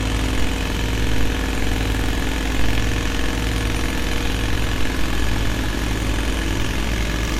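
Generation loss throughout: likely repeated MP3 re-encoding, around seven passes, compounds quantisation noise, leaving swirly, hollow sound, blurred attacks and nothing above 17.5 kHz.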